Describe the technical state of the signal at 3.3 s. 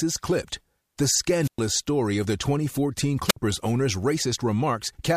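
At 3.3 s the signal suffers a wireless microphone squelch dropout. The radio link from the analogue FM transmitter weakens enough that the receiver's squelch circuit shuts the output off, because it treats the fading carrier as no signal at all. In this speech clip that produces a short burst of rising hiss from 3.28 s, then a hole of near silence lasting about 59 ms, before the voice comes back by 3.37 s.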